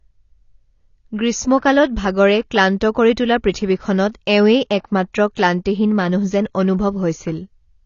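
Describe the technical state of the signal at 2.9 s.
At 2.9 s the speech carries the same damage heard across the whole clip, likely from AAC compression. Nothing remains above 7 kHz, and the dull, smeared, warbling texture reflects spectral lines quantised coarsely at a low bitrate, consistent with roughly 24 kbps.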